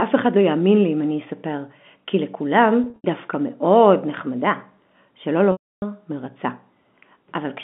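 Speech over a telephone line, with the narrow band that G.711 coding gives. Packet loss with pitch repetition occurs twice. From 2.84 to 3.04 s, gaps totalling 140 ms leave a held, buzzy tone. From 5.52 to 5.82 s, a 300 ms dropout fades into silence before the speech cross-fades back.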